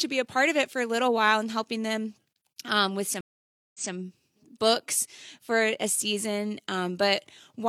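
At 3.21 s the speech cuts out, and there is a stream reconnect lasting until about 3.93 s. The connection dropped and the player fell silent for about 0.54 s. It then reconnected and started a new decoder partway through the stream. Playback picks up roughly 0.19 s before where it stopped, so a short stretch of speech is heard twice. The result is a gap followed by a small backward jump.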